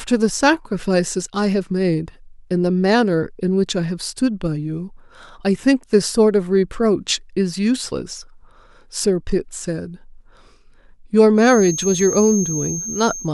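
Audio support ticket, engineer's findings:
Feedback whistle from 11.34 s to the end: thin, steady 6.4 kHz tone sitting roughly 10 dB under the speech, swelling and fading slowly in level. Likely a speaker-to-mic loop parked right at the edge of feedback, ringing without running away.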